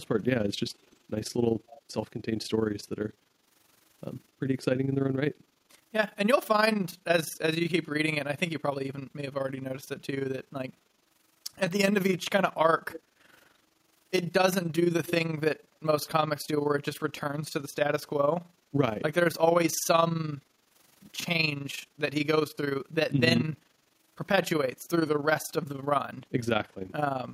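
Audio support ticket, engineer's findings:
Overlap-add ripple, whole clip. Level pumps by about 11 dB at roughly 20 Hz, heard as a rough flutter over the speech. Probable component: frame-based processing stage. Analysis windows recombined with an overlap whose gains don't sum flat, so loudness rises and falls once per frame, which fits a frame rate near 20 per second.

Echo leak, 0.80–0.98 s, 1.69–1.79 s, 12.91–13.02 s, 15.05–15.12 s. Short delayed copies of the speech, 236 ms behind, getting stronger: about −35, −25, −15, then −10 dB relative to speech. Likely far-end echo canceller on a loudspeaker endpoint passing residual mic pickup back into the call.

Background gated by the echo canceller, 13.02–13.24 s and 20.44–20.69 s. Room tone dips about 8 dB for roughly 200 ms, then about 7 dB for roughly 300 ms. The first dip starts right as the 12.91 s echo scrap ends. Canceller suppression clamping the mic hard during loudspeaker playback, then releasing.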